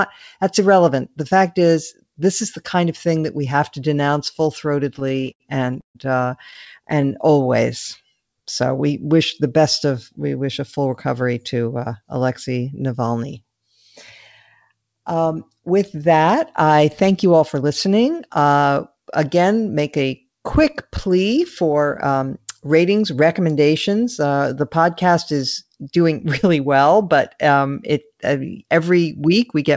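From 4.96 to 6.68 s, just after "have to denounce full", packets kept arriving late and the jitter buffer ran dry twelve times. The receiver stretched the last sound across about 340 ms of gaps, the longest 140 ms, so the speech stutters and drags with nothing lost.

From 6.94 to 7.28 s the buffer, running low or having just raised its target delay, rebuilt its reserve by repeating pitch periods, adding 37 ms. The speech slows to 92% speed at unchanged pitch and sounds drawn out.

The jitter buffer speed-up then appears four times. Each time the buffer held excess audio and trimmed short pitch-period pieces to cut delay, so speech hurries at the same pitch. From 17.26 to 17.88 s, after "with that I thank", it runs at 107% and loses roughly 50 ms. From 22.06 to 23.29 s it runs at 108% and loses around 100 ms. From 25.64 to 26.66 s, between "the podcast is" and "but um it uh", it runs at 109% and loses around 100 ms. 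From 28.74 to 29.70 s it runs at 107% and loses roughly 70 ms.

Throughout, nothing is heard above 8 kHz, which fits a G.722 call codec.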